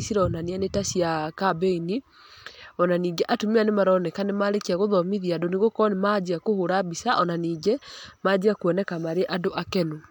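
No technical faults are audible anywhere in the recording.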